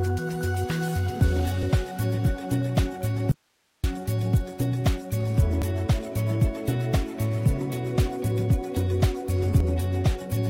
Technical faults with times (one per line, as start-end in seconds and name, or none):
3.32-3.84 audio dropout to a faint residue
5.62-5.66 overlap between stream segments
9.60-9.64 overlap between stream segments